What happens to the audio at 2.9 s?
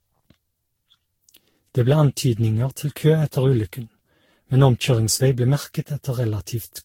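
At 2.9 s the speech carries generation loss, as it does for the whole clip. It sounds swirly, smeared and hollow, with blurred attacks and nothing above 16.6 kHz. The likely cause is roughly ten passes through a lossy codec, which points to Vorbis near 64 kbit/s. Each pass requantises on a shifted frame grid, so the damage piles up.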